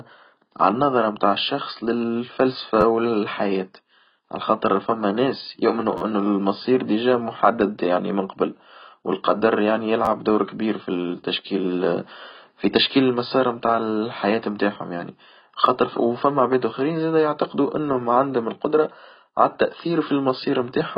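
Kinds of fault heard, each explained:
AAC compression: The whole recording has nothing above 5 kHz, so the speech sounds dull and muffled, with consonants and sibilants losing their edge. The remaining band has a smeared, warbling and fizzy texture where heavy quantisation has stripped out spectral detail and left gaps. This is likely low-bitrate AAC-LC at around 16 kbps, which lowers the bandwidth and codes the surviving frequency lines coarsely against a hearing model.
Repeated buffer: Four brief stutters occur where a short slice of audio plays more than once with a hard join at each repeat. They fall at 2.81 to 2.83 s, 5.98 to 6.01 s, 10.05 to 10.08 s and 15.66 s. Each repeated piece is about 11.6 ms long, which fits a 512-sample buffer. The longest event, at 6 s, has three extra plays. No surrounding audio appears to be lost.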